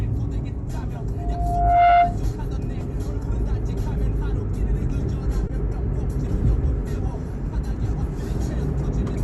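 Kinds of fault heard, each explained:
Loudspeaker feedback squeal: from 1.17 to 2.18 s, a 699 Hz tone swells over roughly 0.7 s as the microphone re-amplifies its own loudspeaker output, peaking about 5 dB above the sound.
Short stall from a late packet: at 5.47 to 5.52 s, a packet arrived 20 ms late, so the receiver held the last sound for 20 ms, then resumed with nothing lost.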